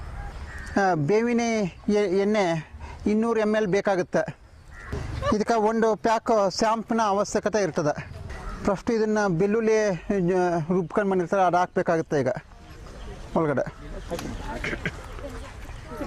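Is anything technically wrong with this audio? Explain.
No, nothing is technically wrong with this audio.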